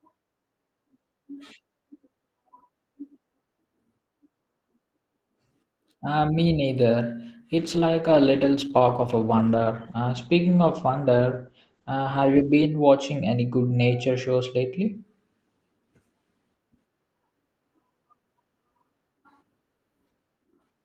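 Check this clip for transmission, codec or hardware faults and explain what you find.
One transmission fault is present. From 7.57 to 15.01 s, right after "me neither", the speech turns muffled and rough: a call bitrate drop, which fits the encoder falling from about 32 to 12 kbps and cutting bandwidth from 20 kHz to 8 kHz.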